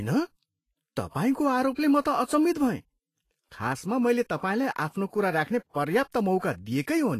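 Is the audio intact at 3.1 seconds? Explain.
No, not really. At 3.1 seconds the speech is affected by what is likely Vorbis compression, which runs through the whole clip. Nothing gets through above 14.2 kHz, and the treble that remains sounds hissy and grainy. At low quality settings the codec quantises high-frequency detail so coarsely that it turns into noise of similar energy, which also roughens tones and smears attacks. The damage is plainly audible and fits a low bitrate, around 32 kbps.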